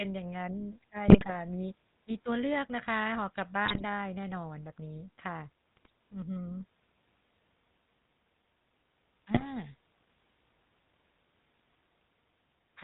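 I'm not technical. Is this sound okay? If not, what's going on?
No. This speech has two problems.

The whole clip sounds buzzy and gravelly, like an old mobile phone call. That is the GSM full-rate codec, an early phone system. It rebuilds the voice from a simplified model of the throat, driven by evenly spaced pulses. It throws away everything above 4 kHz. So the voice loses its crispness and gains a rough, rasping edge. Here that damage is easy to hear.

There are also GSM bit errors. These happen on a weak phone signal, when some of the data arrives scrambled. The decoder then rebuilds the voice with wrong settings for short moments. You hear squawks, pops or gargling. This happens five times: at 1.08 to 1.32 seconds, 3.65 to 3.83, 5.76 to 5.90, 9.34 to 9.44, and 11.70 to 11.74.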